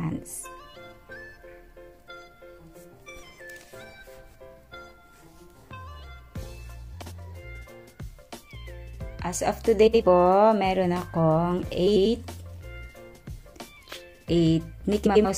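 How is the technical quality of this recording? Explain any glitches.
Four brief glitches affect the recording. All are frames out of order, at 7.02–7.12 s, 9.87–10.02 s, 11.86–12.07 s and 15.06–15.26 s. In each, two neighbouring blocks, about 36 to 93 ms long, were decoded in swapped order, so the stretch plays with its halves exchanged. The result is a garbled flutter. Unlike a dropout or a repeat, nothing goes missing or plays twice, and the overall timing stays intact.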